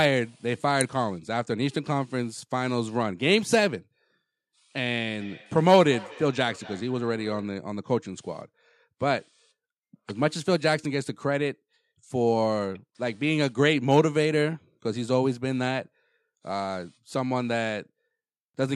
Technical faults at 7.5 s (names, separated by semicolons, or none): feedback echo between two devices